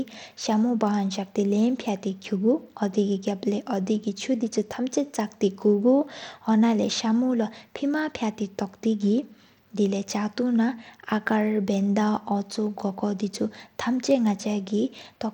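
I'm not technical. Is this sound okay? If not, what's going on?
No. From start to finish, the speech sounds gritty and plainly damaged. The crisp top end drops out and flickers. This is Bluetooth SBC compression, likely from sending the audio over a wireless link that squeezes it hard and throws away the finest detail.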